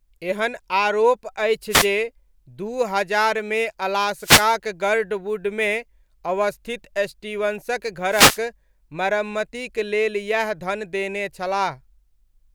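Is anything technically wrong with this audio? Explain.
Yes. Wireless microphone noise hits occur at 1.69–1.87 s, just after "एहन आरोप", then at 4.19–4.49 s and 8.10–8.40 s. Reflections cancel the analogue FM radio signal, so receiver noise rises, heard as a short swish of static.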